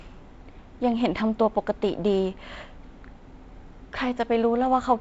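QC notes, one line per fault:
No faults found; the speech carries the G.722 wideband telephone coding path with nothing above 7.7 kHz, a light hiss in the upper band and a slightly grainy lower band, which fits the 48 kbit/s mode.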